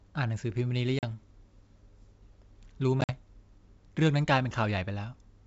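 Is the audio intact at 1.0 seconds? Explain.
No. Packet loss on an ADPCM call cuts a hard-edged silent hole from 0.99 to 1.04 s, about four packets' worth. The decoder's predictor and step size lose sync, so speech returns slightly distorted. On a spectrogram this shows as a blank full-band column.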